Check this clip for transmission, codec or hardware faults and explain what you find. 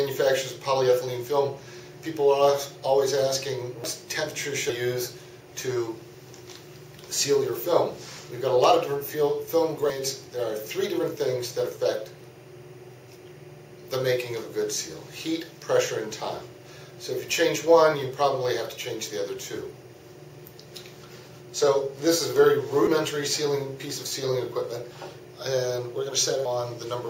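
Two faults are present: timecode bleed running the length of the clip, and a series of abrupt skips.

Timecode bleed is audible throughout as a faint, steady chirping warble well below the main sound. Linear timecode at 24 frames per second is leaking in from an adjacent track or cable, its square wave alternating between tones near 1 kHz and 2 kHz.

At 3.84, 4.69, 6.14, 8.19, 9.90, 22.87 and 26.45 s the sound jumps forward with no gap, each time losing roughly a tenth of a second or a little more. This is likely a dropped buffer (overrun): samples were overwritten before being read, and the remaining audio was spliced together.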